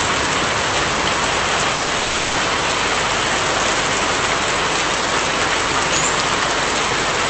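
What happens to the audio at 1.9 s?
Around 1.9 s there are two packet-loss faults close together. A burst of packet loss runs from 1.75 to 1.89 s. About 120 ms of audio never arrived, and the receiver filled exactly that span by extending the last sound and fading it out. A voiced sound becomes a held buzz and anything else a fading hiss, and playback resumes with that section missing. On a spectrogram this shows as frozen, smeared harmonics or a uniform noise band that decays. On the waveform it appears as a repetitive, shrinking envelope.

Just after, from 1.99 to 2.03 s, there is a short concealed packet loss. About 20 ms was lost and patched by continuing the preceding pitch or shaped noise before blending back into the real signal. It is heard as a brief smear or wobble, and it can swallow a short transient. On a spectrogram it looks like a thin stretch of blurred, too-steady texture. 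On the waveform it is a short run of unnaturally regular cycles or steady noise.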